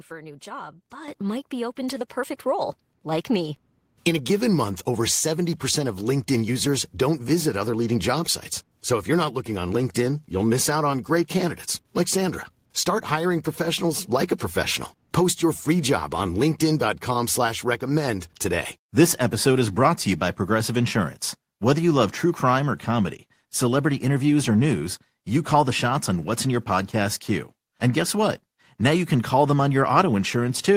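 At 1.08 s, between "for a new job" and "might be open to", the speech and background jump up together by about 9 dB. Smaller steps follow at 2.1 s, after "be open to the", by about 3 dB, and at 3.12 s by about 1 dB. This is microphone volume stepped up: the call software raised the input gain in steps.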